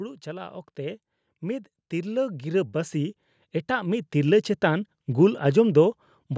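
From 0.23 s to 4.56 s, the automatic gain rising fault appears: the call's gain control judged the incoming level too low and kept raising its gain, by about 13 dB over those four-plus seconds. Because the boost acts on the whole signal, the speech and the background noise swell upward together, so the speech grows steadily louder and the room noise grows with it, within a band that stops at 8 kHz.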